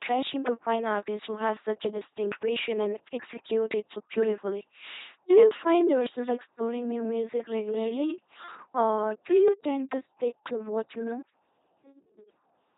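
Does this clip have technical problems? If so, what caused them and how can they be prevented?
Yes. Throughout the speech, the sound is a flat, buzzing, robotic rendering, with nothing present above about 3.8 kHz and heavy codec damage. This is the LPC-10 vocoder at work, consistent with a 2.4 kbit/s stream. It keeps only a crude all-pole model of the vocal tract and excites it with either a pulse train or noise, treating each moment as fully voiced or fully unvoiced, which removes the natural texture and produces the mechanical buzz. To prevent it, record or transmit with a modern wideband codec at a higher bitrate rather than an LPC-10 link.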